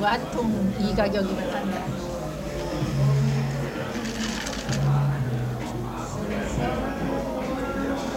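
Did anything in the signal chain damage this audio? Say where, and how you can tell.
Yes: low bit depth without dither throughout, likely from sample-format conversion rounding to about 7 bits. Grainy distortion tracks the sound, roughly 30 dB down, and shows as waveform stair-steps and a signal-following spectrogram haze.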